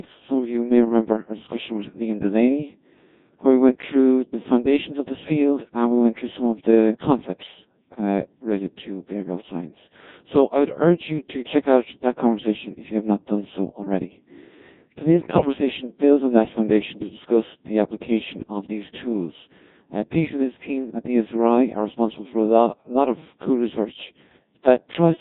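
The whole clip runs through the Codec 2 vocoder, and the heavy damage gives the speech a robotic, buzzy quality. The decoder rebuilds the speech from sine waves driven by pitch, voicing, energy and envelope, not the real waveform, which fits a rate of about 1.6 kbit/s.

From 15.21 to 15.58 s, just before "builds on that foundation", bit errors on digital voice radio hit. About one bit in ten flipped across what sounds like roughly eight frames, so pitch, level and tone colour jump around and the sound breaks into warbling, bleepy gibberish.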